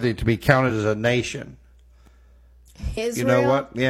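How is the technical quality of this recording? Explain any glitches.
Two brief glitches mar the speech, both from damaged data in a compressed stream, at 0.65 to 0.71 s and 2.93 to 2.98 s. Corrupted bytes make the decoder misread frames and lose sync, producing a short disruption in the sound. A spectrogram shows broadband smears; the waveform shows abrupt, malformed segments.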